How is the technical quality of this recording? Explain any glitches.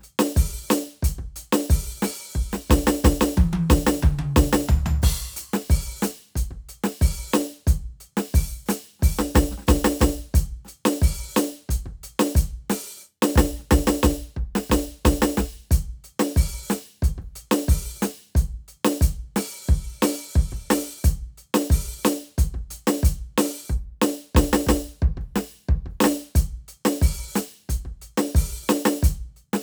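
The music comes through with no technical faults to be heard anywhere in the recording.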